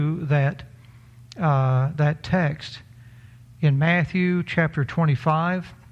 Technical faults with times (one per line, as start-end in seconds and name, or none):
none